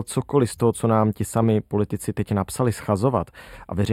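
Channel delay (comb filtering) runs through the whole speech clip. One channel arrives a tiny fraction of a millisecond behind the other, a lag that points to a shift of a few samples, and when the two are folded to mono the shared content cancels at fixed, evenly spaced frequencies. The first notch sits at roughly 7 kHz, so the speech sounds hollow and phasey in the upper presence range.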